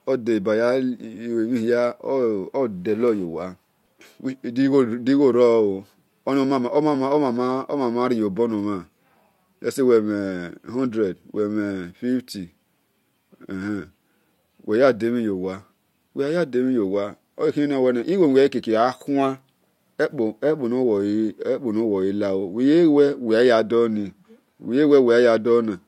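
Channel delay (comb filtering) affects this speech clip from 22.43 s to the end. One channel lags the other by roughly one sample, about 0.02 ms, so when they are summed to mono the shared content cancels near 20 kHz, gently dulling the top end.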